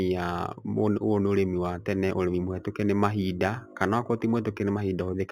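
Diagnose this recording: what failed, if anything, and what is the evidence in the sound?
The failure is in sample-rate conversion: imaging from linear upsampling, present throughout the speech. Above 4 kHz there is a faint mirrored copy of the band, extending to 8 kHz and sitting roughly 30 dB below the signal. It adds a light metallic shimmer to sibilants, and the top of the original band sounds dulled. This fits an 8 kHz source raised to 48 kHz by straight-line interpolation, which filters too weakly to suppress those images.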